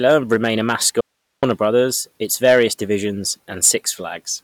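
From 0.06 s to 1.80 s the speech shows hard clipping. It is driven about 4 dB past what the stage can pass. Peaks are cut flat, so loud syllables crackle with harsh high harmonics.

Inside that stretch, at 1.01 s, comes an audio dropout to a faint residue. The speech cuts out abruptly for 0.42 s, until 1.43 s. Only hiss remains, roughly 55 dB below the speech. The signal was likely lost upstream while the later path stayed live.

Hard clipping returns from 2.45 s to 2.64 s, about 6 dB over. It comes back briefly at 3.64 s to 3.70 s, about 5 dB over. Each gives a short burst of fuzz on the peaks.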